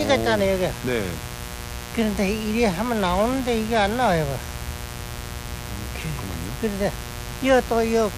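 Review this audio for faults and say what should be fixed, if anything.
A mains buzz runs from start to finish. It is a steady, raspy buzz. It sits only about 10 dB below the wanted sound. The buzz is built on 60 Hz. Sharp switching spikes repeat twice per mains cycle, so its harmonics stretch well up into the kilohertz range. That explains the gritty edge rather than a smooth hum. To prevent it, keep dimmers and rectifying supplies away from the signal path and use properly shielded, grounded cables.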